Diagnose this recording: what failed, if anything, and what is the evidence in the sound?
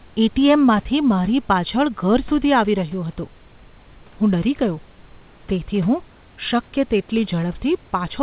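Nothing failed: the speech tops out at 4 kHz, which fits a narrowband call path such as G.711 A-law working as designed, the room noise sits about 33 dB below the speech, and no stage from capture to playback shows a defect.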